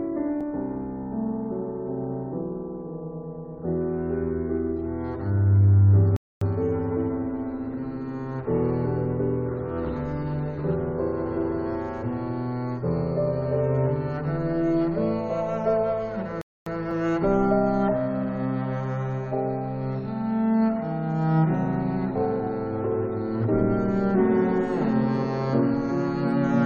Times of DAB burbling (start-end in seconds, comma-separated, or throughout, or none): none